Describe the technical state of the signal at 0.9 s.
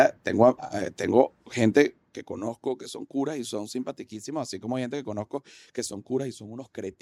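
At 0.9 s the speech signal is intact, with no audible fault at that moment.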